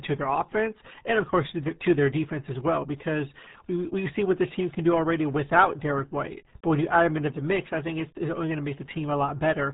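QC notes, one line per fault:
throughout: RealAudio 14.4 codec. The speech went through a dial-up-era speech coder squeezed to a rate that fits RealAudio 1 at 8 kbit/s. Everything above 3.8 kHz is gone, so the voice sounds muffled, and the heavy coding damage adds a gargling texture.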